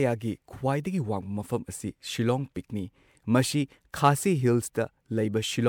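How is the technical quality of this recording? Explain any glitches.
The speech has audible generation loss throughout its full length. It was likely run through a lossy codec repeatedly, around four MP3 passes at what sounds like 128 kbit/s, each requantising on a shifted frame grid so that noise and spectral holes accumulate. The result is swirly, smeared and hollow, with blurred attacks, worse than one pass at that rate would produce, even though content still reaches up to 20.2 kHz.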